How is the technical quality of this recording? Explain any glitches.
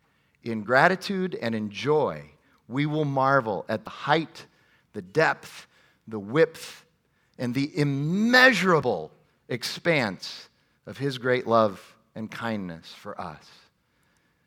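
The speech has three brief skips. At 3.87, 8.82 and 13.78 s, roughly 40 ms vanishes with no silence left, likely audio missing between chunks at 5 s boundaries. This gap-free joining distinguishes it from a dropout.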